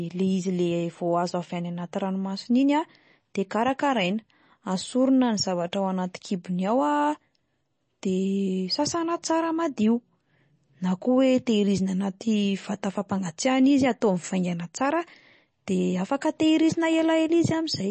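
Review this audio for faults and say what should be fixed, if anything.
Throughout the speech, the signal was likely passed through MP3 compression at a low bitrate, which fits 32 kbps. The encoder discards everything above 8.3 kHz and switches weak frequency lines on and off between frames, so the audio sounds dull and watery, with plainly audible swirling. To prevent this, keep a lossless copy and encode at a much higher bitrate.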